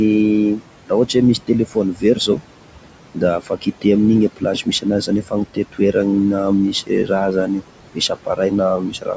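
Right from the start you can hear noise suppressor artifacts: the room noise, sitting about 13 dB below the speech, gets pulled down by about 18 dB in the gaps and swells back under the talking, as the suppressor lowers the noise bands frame by frame.

The same suppressor also mistakes bits of speech for noise, so there's speech cut by the noise suppressor in five stretches: 0.57 to 2.42 s, 3.15 to 3.85 s, 4.36 to 5.95 s, 6.72 to 7.62 s and 7.95 s to the end. In each, a few hundred milliseconds of soft consonants and word tails drop by about 14 to 18 dB and sound swallowed.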